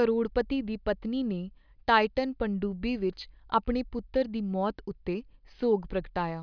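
Listening to the speech recording, nothing technical stood out as wrong at any point.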